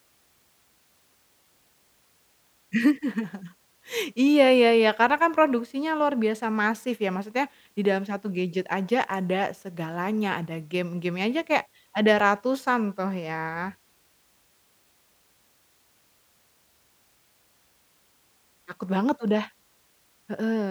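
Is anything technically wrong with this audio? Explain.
No, nothing technically wrong here.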